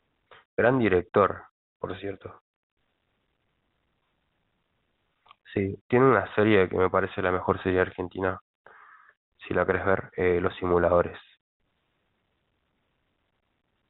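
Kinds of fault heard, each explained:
Nothing wrong turns up here, just speech coming over an ordinary telephone-style connection.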